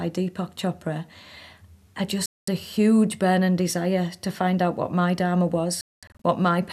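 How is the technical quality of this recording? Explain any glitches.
The speech has two digital broadcast dropouts. At 2.26 s it goes dead for about 0.22 s and comes back on "a huge burning desire." At 5.81 to 6.25 s it breaks into several short holes, about 0.31 s lost across 0.43 s, the longest about 0.22 s. The receiver lost signal or saw frames fail their checks, muting until good ones returned, which points to several frames dropped each time. Whatever was sent during those gaps is simply gone.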